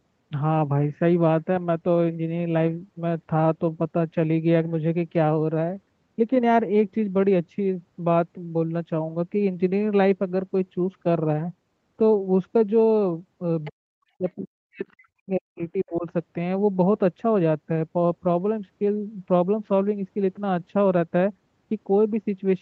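A speech recording with two call-processing faults close together. From 13.64 to 13.71 s a brief scrap of the other side's voice leaking through sits roughly 20 dB below the talker. It is most likely a residual echo the canceller failed to remove from the loudspeaker pickup. On a spectrogram it shows as a faint, short smear of unrelated harmonics. Straight after, from 13.7 to 16.06 s, the talker's speech is suppressed in double talk, probably because the canceller mistook overlapping speech for echo and attenuated everything. Across about two seconds the level dips in pieces by as much as about 40 dB. This appears as gouged, near-silent gaps in the waveform envelope and darkened, broken bands in the spectrogram. The band stops at 8 kHz throughout, as expected from the call codec path.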